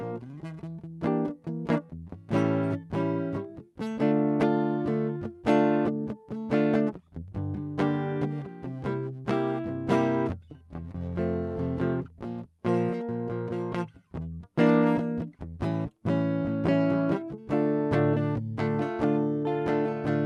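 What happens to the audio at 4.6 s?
At 4.6 s the music plays through intact, with no dropout, glitch or other fault at that moment.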